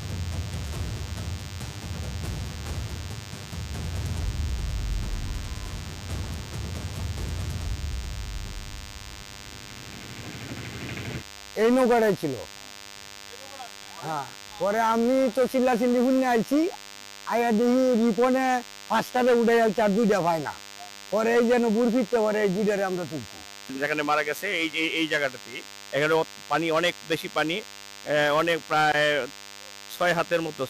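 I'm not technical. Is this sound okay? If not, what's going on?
No. A DECT cordless phone buzz runs under the sound from start to finish. A cordless phone or its base station nearby sends a short radio burst 100 times a second. The audio equipment picks that up and turns it into sound, so you hear a steady, thin buzz at 100 Hz, rich in higher tones stacked above it. Moving the phone and its base away from the recording gear would stop it.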